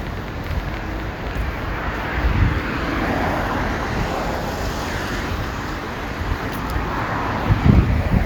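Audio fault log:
0.07–1.63 s, train of clicks: a burst of sharp ticking sits on top of the sound for the first second and a half, about 7.7 clicks per second at an uneven pace, roughly fifteen in all, each with much the same snap and peaking around 10 dB above the sound itself. Repeated near-identical pulses at that rate likely come from electrical interference or a faulty connection or power supply briefly injecting spikes into the signal.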